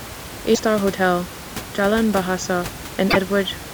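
At 0.54 to 0.60 s and 3.10 to 3.17 s the sound jumps ahead into a brief glitch spanning roughly two to three 26.1 ms frames, likely a broken MP3 bit reservoir.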